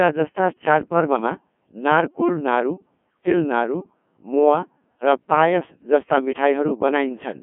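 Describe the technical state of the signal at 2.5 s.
At 2.5 s the speech is passing through a Codec 2 vocoder, as it is for the whole clip. Only pitch, voicing, energy and a coarse spectral envelope survive; the decoder rebuilds the voice from sine waves, so the original waveform is gone. The result is heavily robotic and buzzy, confined to a 150 Hz to 3.4 kHz band with nothing above 3.8 kHz, which fits a low-rate mode around 1.6 kbit/s.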